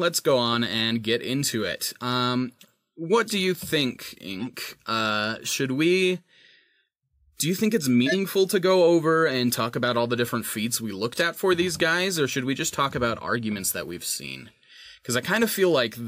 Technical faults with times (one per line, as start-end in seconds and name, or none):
3.28-3.31 corrupt frame decoded
4.40-4.47 corrupt frame decoded
5.46-5.51 corrupt frame decoded
8.06-8.16 corrupt frame decoded
11.13-11.18 corrupt frame decoded